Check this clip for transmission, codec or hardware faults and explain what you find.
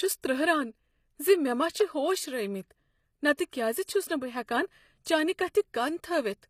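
Two codec faults are audible in the speech: a constant band-replication treble and two short pre-echoes.

Throughout the clip, the top end sounds artificial. Sibilants come out gritty and metallic, and nothing is present above 14.9 kHz. The likely cause is HE-AAC compression. The codec transmits only the lower spectrum and synthesises the treble by copying lower bands upward under a coarse envelope, so the upper harmonics don't match the real ones. The damage is plainly audible, which fits a low bitrate of around 24 kbps.

At 3.36 to 3.39 s and again at 3.84 to 3.88 s, a short hiss rises just ahead of a sharp onset, and the attack itself sounds softened. This is pre-echo. The transform spreads its quantisation noise across the whole block, so noise scaled to the loud attack also fills the quiet moment before it. Here that smear lasts about 25 ms in the first case and 34 ms in the second.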